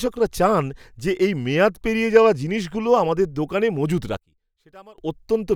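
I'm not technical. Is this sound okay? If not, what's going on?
No. From about 4.17 to 4.98 s the speech suddenly drops almost to nothing. That's likely one channel inverted: one side of the stereo is flipped upside down, so when both sides get mixed together they cancel each other out.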